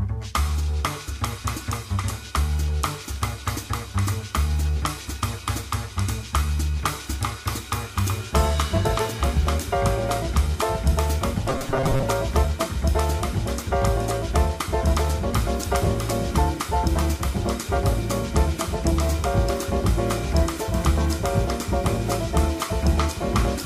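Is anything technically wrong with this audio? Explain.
Yes. From 11.50 to 12.04 s the audio shows robotic sound from repeated short buffers. The buzz sits at 134 Hz, which fits a chunk of roughly 7.5 ms being replayed over and over. The likely cause is new audio arriving too seldom, so playback fills the gaps by looping the last short chunk. About half of that stretch is repeated material rather than real audio. The sound turns rigid and metallic, while still loosely tracking its original contour.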